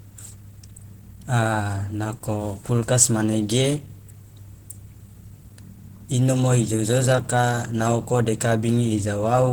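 A speech clip with plainly audible Opus compression throughout: the sound is hoarse, muffled and grainy, which fits the likely cause of roughly 16 kbps in hybrid mode. A spectrogram shows noise-filled, smeared upper bands, with energy reaching about 20.1 kHz.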